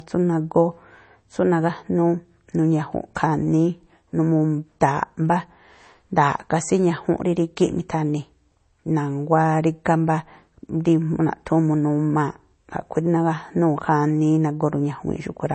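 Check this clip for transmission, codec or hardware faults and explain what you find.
One fault runs through the whole speech clip: low-bitrate audio saved at a high bitrate. Nothing is present above 8.3 kHz, so the top end sounds dull and band-limited. This likely comes from a low-bitrate MP3, consistent with a 32 kbit/s source, that was re-encoded at a much higher rate. The second encode keeps the first one's cut-off and artefacts because it cannot rebuild what was discarded.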